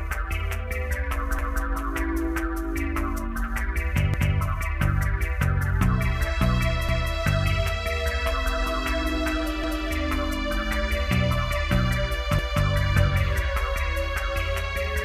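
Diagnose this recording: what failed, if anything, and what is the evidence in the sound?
Stutters at 1.39, 4.14, 6.89, 9.64 and 12.39 s each replay 0.25 s of sound: overlapping chunks in buffering, where each 2.5 s block restarts early.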